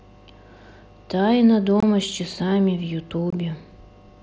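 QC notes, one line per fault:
1.80 s and 3.30 s, unconcealed Bluetooth headset packet loss: the speech cuts out for about 23 ms each time, which fits three lost 7.5 ms frames on the mSBC wideband link. Nothing fills the gaps, so each hole starts and stops on an abrupt edge.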